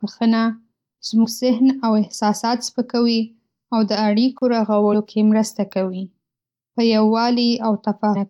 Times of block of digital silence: 4.38-4.42

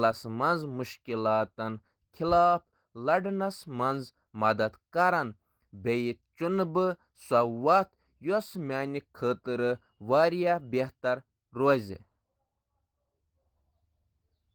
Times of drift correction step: none

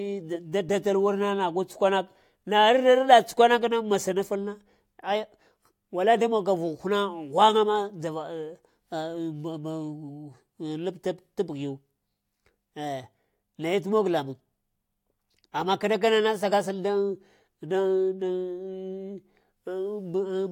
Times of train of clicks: none

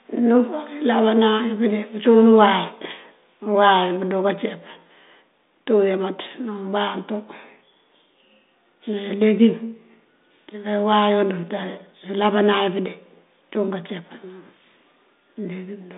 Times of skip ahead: none

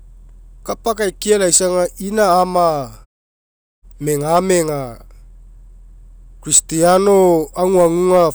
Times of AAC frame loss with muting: none

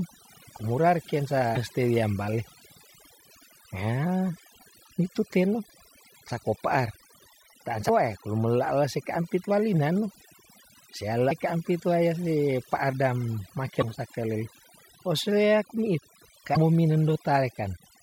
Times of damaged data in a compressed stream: 1.53-1.57, 7.85-7.90, 11.27-11.32, 13.78-13.83, 16.52-16.57

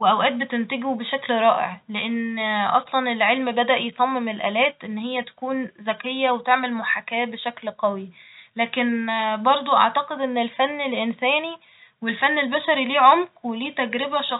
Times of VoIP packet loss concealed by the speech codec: none

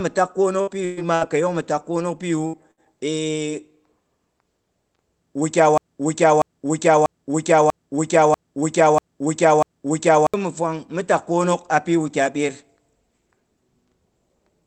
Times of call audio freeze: none

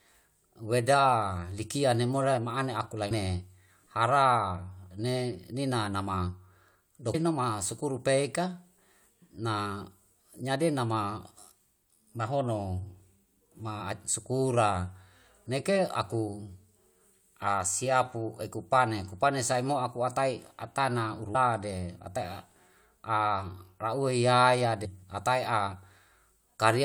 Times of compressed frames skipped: 3.10, 7.13, 17.46, 21.34, 24.84

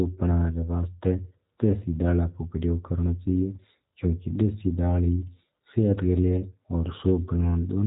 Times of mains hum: none

